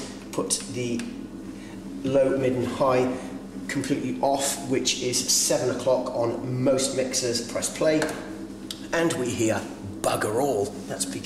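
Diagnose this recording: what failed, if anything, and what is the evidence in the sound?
No fault detected in any stage.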